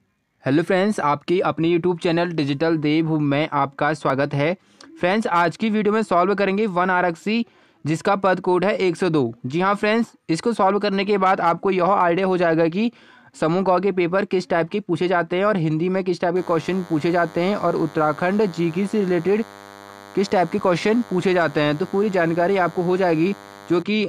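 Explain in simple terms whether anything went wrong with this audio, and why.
From about 16.35 s to 23.82 s there's a thin, steady buzz sitting well under the main sound: DECT cordless phone buzz. A nearby cordless phone or its base sends a radio pulse 100 times a second, and the audio gear picks it up as that hum.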